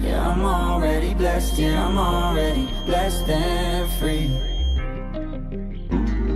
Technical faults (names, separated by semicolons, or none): feedback whistle